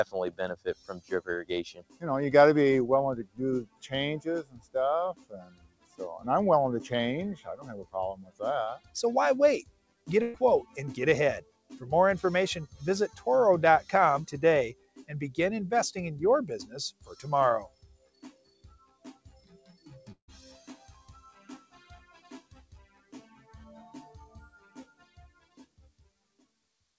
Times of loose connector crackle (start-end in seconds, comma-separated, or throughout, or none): none